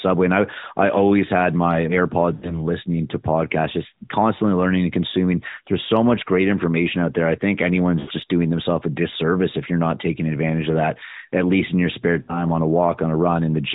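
Lost AMR speech frames: corrupted frames made the decoder recycle its last good pitch and vocal tract settings at falling gain. After "I always had my" (2.34 to 2.60 s), "out there I think" (8.00 to 8.11 s) and "least in your spare" (12.22 to 12.46 s), the speech smears into a fading warble lasting about 80, 80 and 60 ms, then returns briefly rough.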